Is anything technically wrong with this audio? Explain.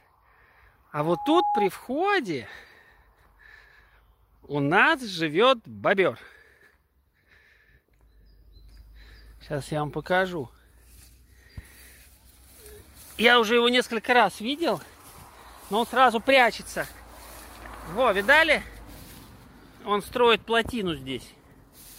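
Yes. From 1.00 s to 1.69 s there is a loudspeaker feedback squeal, a single tone at 828 Hz. A microphone is picking up the loudspeaker it feeds, and at that frequency the loop gain tops one, so the tone feeds itself and grows over roughly 0.4 s until it sits at about the level of the rest of the sound. On a spectrogram it is one bright horizontal line at 828 Hz. The waveform envelope swells over those first 0.4 s or so.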